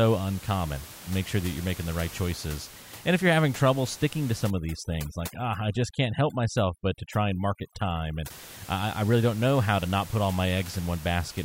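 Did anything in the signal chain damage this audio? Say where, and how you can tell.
Yes. Overdone noise removal in the call-processing stage damages the speech from 4.50 to 8.30 s. Across that stretch the room noise, which elsewhere sits about 18 dB below the speech, drops and breaks up into twinkling specks. The suppressor is set too aggressively: it drives individual frequency bands down or off whenever they come close to its noise estimate, and it strips the quieter parts of the speech along with the noise.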